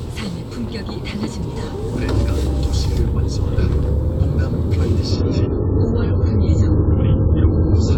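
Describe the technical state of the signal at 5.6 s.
Dull, band-limited sound with a swirly edge: at 5.6 s the audio sits inside a stretch of adaptive stream at a lower bitrate that runs from 5.11 s to the end. The switch is abrupt and gapless, and nothing survives above 7.6 kHz. The stream dropped to a much leaner encoding of the same material, which fits a fall from around 96 kbit/s to around 16 kbit/s AAC. That starved the codec of bits, so it discarded the treble and smeared what remained.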